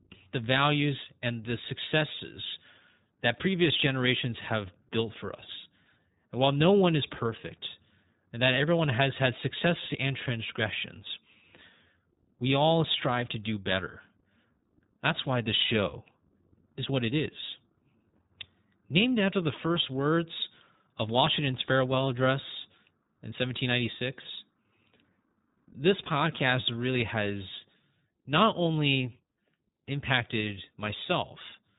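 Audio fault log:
throughout: iLBC codec. A narrowband VoIP coder, whose sound fits its 20 ms, 15.2 kbps mode, has coded each frame's excitation independently and discarded everything above 3.8 kHz, so the speech sounds muffled and telephone-like, with a plainly rough, synthetic grain.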